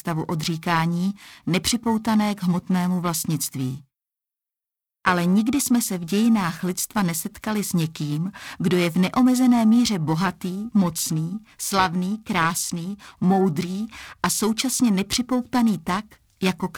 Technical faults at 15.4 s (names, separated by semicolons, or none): periodic clock jitter